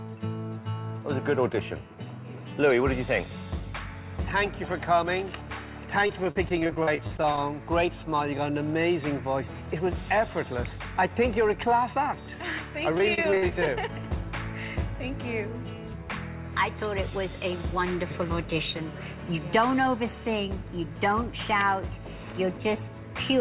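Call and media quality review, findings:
Repeated packet loss (robotic sound), 6.07–7.38 s and 12.98–13.67 s. Choppy stutter with pieces missing. About a fifth to a quarter of each stretch is concealed. The longest holes are 40 ms and 49 ms. Probable component: network transport into the jitter buffer, with concealment repeating the last sound. This differs from a single dropout because the holes recur rapidly rather than as one isolated gap. Band limited to 4 kHz throughout, consistent with G.711 A-law.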